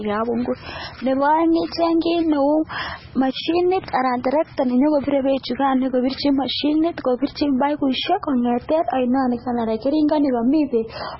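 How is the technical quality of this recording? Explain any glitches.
Technical quality is poor, with heavy compression damage across the whole recording. An MP3 encoder likely starved of bits removed the high band and dropped quieter frequency detail, which fits a very low bitrate of around 16 kbps. Nothing survives above 5.6 kHz, so the speech sounds dull and muffled. The weak components that remain flicker in and out from frame to frame, giving a watery, swirling texture, metallic chirps on s sounds, and smeared consonant onsets.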